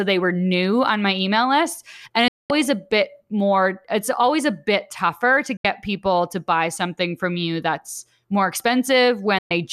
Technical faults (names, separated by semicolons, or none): digital broadcast dropout